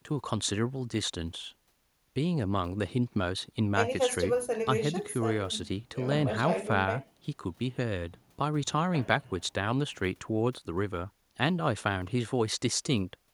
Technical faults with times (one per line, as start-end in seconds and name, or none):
none